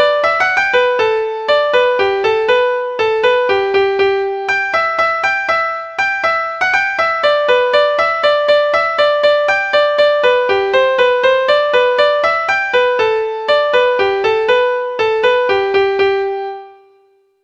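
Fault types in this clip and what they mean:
Nothing here sounds like a technical fault; there's no dropout, glitch or distortion to pick out anywhere in the audio.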